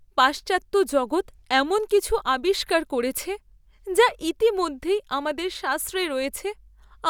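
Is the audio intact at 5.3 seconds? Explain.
Yes, at 5.3 seconds the speech plays through cleanly, with no dropout, click, distortion or other audible fault at that moment.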